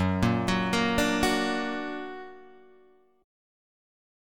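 No technical faults are audible.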